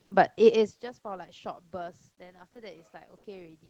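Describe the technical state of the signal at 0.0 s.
Comfort noise in place of the background occupies roughly 0.03 to 0.11 s, an 80 ms stretch at the very start. The sender likely stopped transmitting during the pause, as Opus DTX does, and the receiver filled it with steady synthetic noise about 50 dB below the loudest sound, which differs by about 1 dB in level from the real background it replaces.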